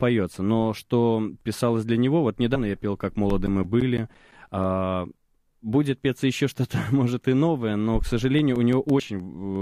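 At 2.54 to 2.56 s the speech lurches forward: compressed frames skipped. A couple of frames never got decoded, so around 50 ms of audio is simply gone. The same thing happens at 4.53 s, losing maybe 10 ms, and at 8.98 s, about 40 ms. Between 3.13 and 4.81 s there are CD scratch ticks, eleven of them, each at most around 10 ms, where the player patched data the error correction couldn't rebuild, once per disc turn. Seven more, shorter ones follow from 8.22 to 9.20 s.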